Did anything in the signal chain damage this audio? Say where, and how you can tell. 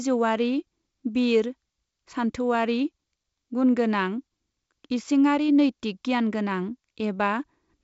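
No, nothing in the chain damaged this speech. It has the sound of G.722 wideband telephone coding, with content stopping near 7.7 kHz and only a light coding texture, which fits the 56 kbit/s mode.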